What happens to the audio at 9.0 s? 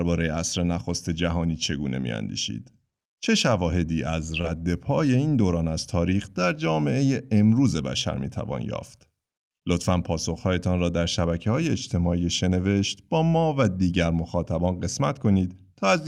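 Nothing goes wrong at 9.0 s; the speech carries on intact through that moment, with no dropout, glitch or distortion to be heard.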